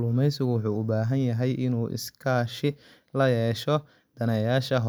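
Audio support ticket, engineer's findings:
No faults found on listening; speech clip checked through, no dropouts, glitches, distortion or level problems to report against any component.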